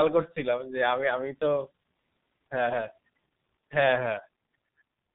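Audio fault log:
throughout G.723.1 codec: the speech is heavily damaged by this low-rate telephony codec, and the muffled, hoarse quality and smeared consonants fit its roughly 6.3 kbit/s mode. Nothing survives above 3.8 kHz, so sibilants and crisp attacks lose their brightness. The codec rebuilds speech from a coarse vocal model refreshed only once per 30 ms frame, so fast changes between sounds blur together and the voiced parts take on a rough, buzzy texture.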